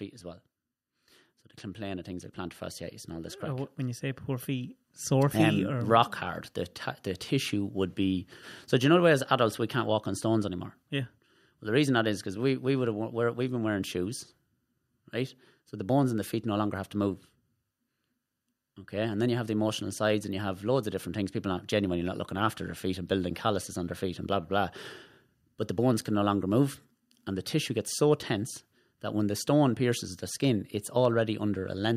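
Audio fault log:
1.75–5.38 s, automatic gain rising: the level of the speech climbs steadily by about 11 dB over roughly three and a half seconds, and the background climbs with it at the same rate. This is the signature of an automatic gain control reacting to an input it judged too quiet. It raises its gain slowly rather than in a step, so the whole signal swells gradually instead of jumping, and the noise floor rises with the speech.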